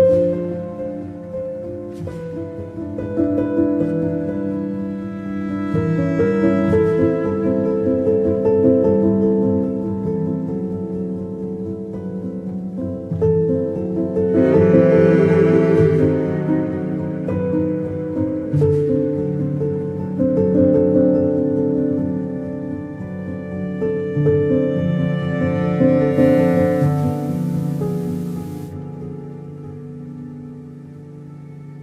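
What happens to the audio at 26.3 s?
At 26.3 s the sound is inside a spell of digital radio blending to analogue, running from 26.09 to 28.76 s. The receiver lost its digital signal and cross-faded over about 110 ms to the station's FM broadcast, then returned. Loudness holds steady, but hiss rises to around 30 dB below the programme. On a spectrogram a faint broadband noise floor fills the gaps across that span; the waveform envelope shows no level step.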